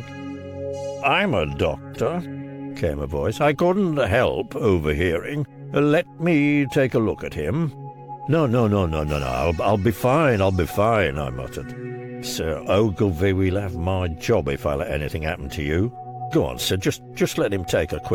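At 1.92 s, lasting about 40 ms to 1.96 s, there is a short burst of damaged data in a compressed stream. The bytes at that point are corrupted, so the decoder misreads them, loses frame sync and has to hunt for the next valid header before it can resume. The result is a brief glitch that interrupts the audio for those 40 ms.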